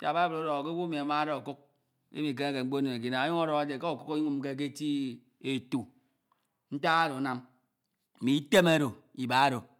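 Listening to this speech recording, nothing stood out as a technical problem.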